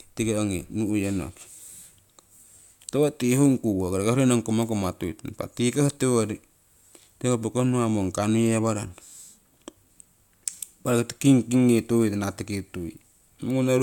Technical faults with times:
none

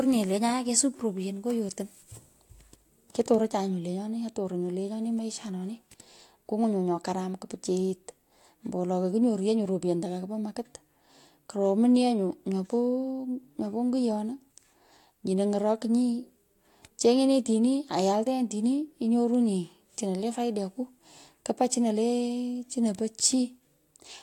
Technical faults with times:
none

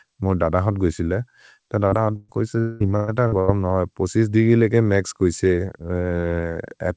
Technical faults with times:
1.88-1.95 short concealed packet loss
2.16-2.31 burst of packet loss
2.60-2.83 long network dropout
2.96-3.11 burst of packet loss
3.28-3.35 short concealed packet loss
3.40-3.51 burst of packet loss

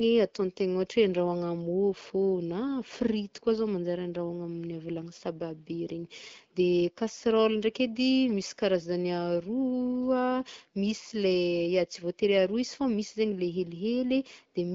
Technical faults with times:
none

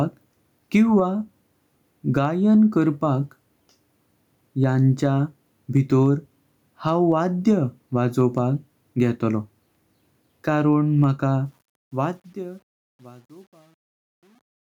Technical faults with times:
0.00-14.69 gain pumping
11.46-14.69 truncation distortion on a fade

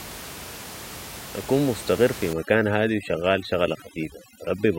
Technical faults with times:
2.33-4.78 overdone noise removal

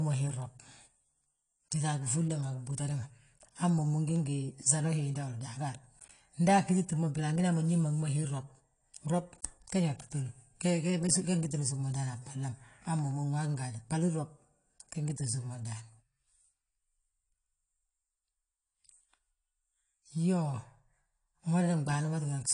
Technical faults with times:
0.00-22.54 AAC compression

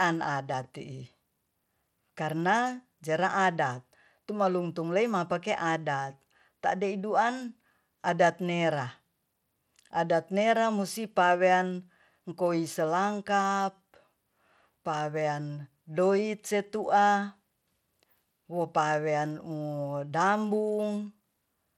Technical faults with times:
0.00-21.78 Bluetooth SBC compression

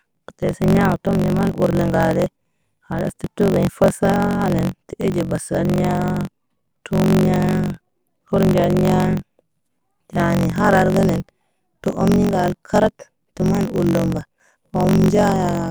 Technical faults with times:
0.00-15.71 block size mismatch (truncated)

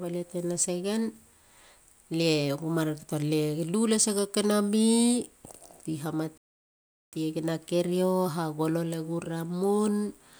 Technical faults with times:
6.38-7.13 playback stall

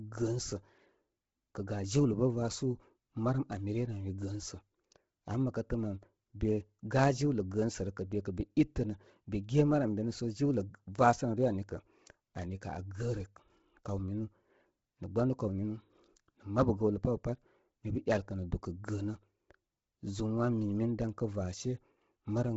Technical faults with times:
0.00-22.56 Bluetooth LC3 compression

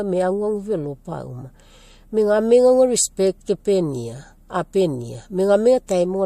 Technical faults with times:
5.87 pre-echo

